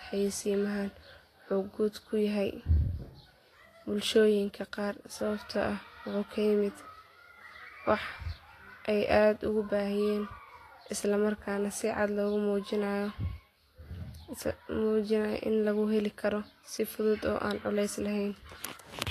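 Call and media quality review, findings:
Vorbis compression, throughout the clip. Likely cause: a low-bitrate Vorbis encode, consistent with roughly 34 kbps. Band-limited at 14.2 kHz; treble residue quantised so coarsely that its detail is replaced by noise of similar energy. Result: plainly audible hiss and grain on the speech, roughened tonal parts, blurred consonant attacks.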